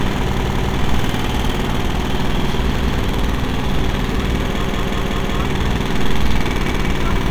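Repeated buffer stutters at 0.37, 2.79, 4.64 and 6.69 s: late data made the device replay 186 ms chunks, shown as identical waveform blocks with hard vertical seams.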